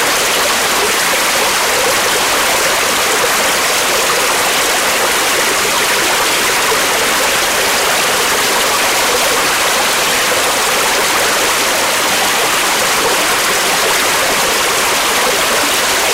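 Hard clipping runs through the whole recording of everyday sounds. The signal was driven about 17 dB past what a stage in the chain could pass. Its peaks were sliced flat at that limit. Nearly a third of the waveform was cut off at that limit. Those square tops add harmonics high in the spectrum. The result is a harsh, buzzing fuzz on every loud sound, not just an occasional crackle on the peaks.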